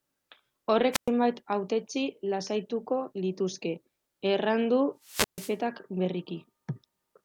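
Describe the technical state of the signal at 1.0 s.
At 1.0 s the speech is inside a wireless microphone squelch dropout running from 0.92 to 1.09 s. The FM link fades, hiss briefly rises, then the receiver's squelch mutes the output for about 114 ms, leaving a near-silent gap before the signal returns.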